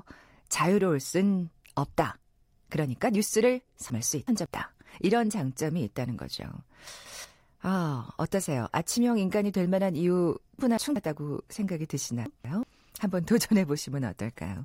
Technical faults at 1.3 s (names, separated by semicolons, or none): none